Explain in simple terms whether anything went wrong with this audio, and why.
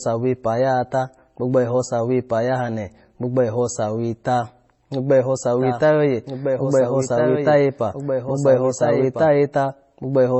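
The speech sounds dull and muffled throughout, with nothing above about 8 kHz, and carries a mix of different artefacts heard together rather than one clean kind of roughness. This is likely transcoding between lossy codecs: the audio was squeezed by one compression format and then re-squeezed by another. The second pass wasted effort re-encoding the first pass's damage and added its own, so both sets of flaws pile up, and the lowest treble limit remained.

From 5.6 s to 9.28 s, just after "gbogbo eho", a second copy of the speech plays underneath, a little quieter and about a second and a half behind, so two overlapping streams are heard at once. That copy has no echo tail or room sound, and it starts and stops abruptly. This is a doubled audio track, likely caused by the same audio being picked up a second time through a slower path, or by an edit that left two out-of-step copies.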